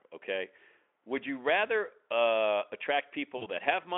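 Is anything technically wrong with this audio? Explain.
Yes, VoIP packet loss concealed by the speech codec hits 3.37–3.48 s. Roughly 40 ms went missing, so the decoder stretched its last pitch and filter into a fading buzzy tone or coloured noise that stays weak briefly afterward.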